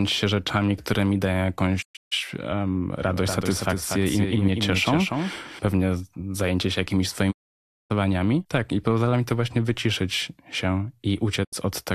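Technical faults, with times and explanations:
1.81–2.13 s, 7.30–7.92 s and 11.43–11.54 s, digital broadcast dropout: the receiver stopped getting decodable frames and muted until clean ones arrived. Each gap opens and closes with a quick 20 ms fade. The first is broken into several short holes, 264 ms lost across 288 ms, the longest 144 ms. The second is a solid 576 ms silence and the third a 72 ms blink. The speech in those gaps is gone.
3.07–5.59 s, doubled audio track: a second full-band copy of the speech runs about a fifth of a second behind the original and roughly 5 dB quieter. It has no reverberant tail or room colouring. It switches on and off abruptly at both ends. This is likely a slower capture path feeding the same signal into the mix again, which gives a hard slapback echo rather than a sense of space.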